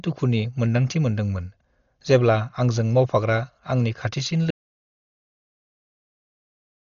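The speech sounds dull and band-limited throughout, with nothing above about 6.9 kHz and a rough, fluttering noise around tonal parts. This is likely heavy Dolby Digital compression at a low bitrate, near 40 kbps, where the band is narrowed and many frequency lines get no mantissa bits and are filled with dither noise. After "आंजों मावफाग्रा आंनि खाथिसिन" the sound cuts out at 4.51 s into total silence with no room tone, and it stays silent to the end, about 2.3 s. This is likely an audio dropout to silence, in which the input was lost while silence kept being written.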